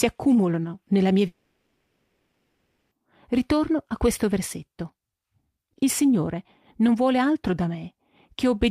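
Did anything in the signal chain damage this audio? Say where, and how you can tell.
Yes. From 1.27 to 2.93 s the speech cuts out and a buzzy continuation of the last sound fades, filling about 1.64 s before speech resumes with that stretch gone. This is likely a long network dropout, with receiver concealment papering over the missing audio.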